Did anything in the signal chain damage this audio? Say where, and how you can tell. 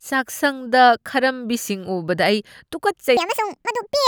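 Yes. From 3.17 s to the end of the clip, the speech suddenly plays about 1.65 times too fast, a section at the wrong speed. Pitch jumps roughly ten semitones and the delivery turns hurried at the same instant, with the formants raised too, giving a chipmunk quality. That locked change rules out a pitch shifter or time-stretch, which alter only one. The likely cause is an editing or playback stage running that segment against the wrong sample clock.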